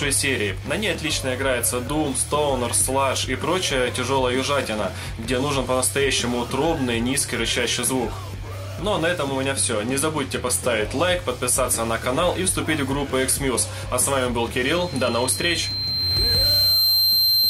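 From 14.65 s to the end at 17.49 s, a single 4.1 kHz tone swells over roughly two seconds into a piercing loudspeaker feedback squeal, ending up about 5 dB above the other sound. The microphone is picking up its own loudspeaker, with loop gain above one at that frequency.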